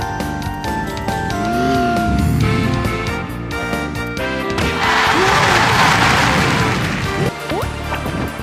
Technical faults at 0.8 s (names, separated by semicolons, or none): doubled audio track